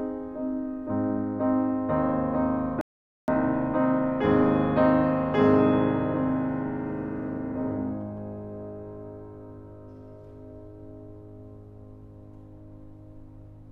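A music clip with one rebuffering stall. At 2.81 s the music cuts to silence. It resumes at 3.28 s, exactly where it stopped. The player had run out of downloaded audio and waited for more. Nothing is lost, but about 0.47 s is added.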